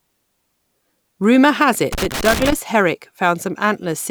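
Loose connector crackle runs from 1.92 to 2.53 s, an irregular burst of scratchy crackle lasting about 0.6 s over the speech. A worn or dirty contact somewhere in the signal path is making and breaking as it shifts, so the audio is chopped on and off in rapid, uneven fragments. Any DC present on the line adds pops at the reconnections.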